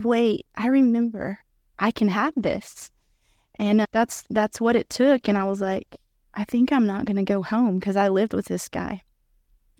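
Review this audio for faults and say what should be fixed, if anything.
A call bitrate drop makes the speech coarser from 2.26 to 5.99 s, between "I remember I can" and "I think I'm not". This fits the encoder falling from 32 to 15 kbps when the bandwidth estimate fell. Prevent it by reserving stable uplink bandwidth and tuning congestion control so the Opus bitrate stays at a safe floor.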